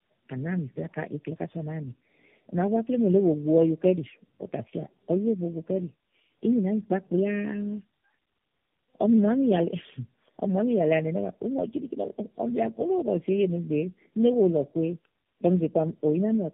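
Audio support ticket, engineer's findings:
Rough, muffled, warbly speech throughout, nothing above 3.5 kHz. Tandem speech coding: likely three low-rate speech codecs in series, such as AMR-NB and G.729A bridged over G.711 links, each re-encoding the previous stage's already degraded output, so artefacts compound.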